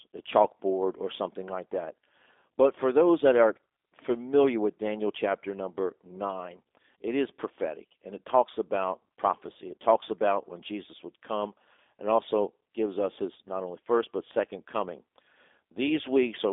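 Speech run through the G.729 codec for the whole clip, at what sounds like 8 kbit/s, rebuilt from a vocal tract filter and sparse pulses. Nothing passes above 3.8 kHz, the line band sits near 300 Hz to 3.6 kHz, and plainly audible roughness gives a synthetic edge.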